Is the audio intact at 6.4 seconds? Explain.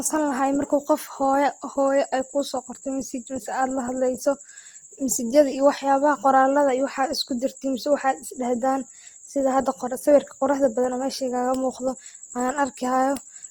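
No. At 6.4 seconds, as across the whole clip, the speech sounds grainy and rough, with a noisy texture in place of clean detail. This is likely Opus compression in its music mode, which fits a low bitrate around 24 kbps that fills starved bands with noise or folded copies of lower bands.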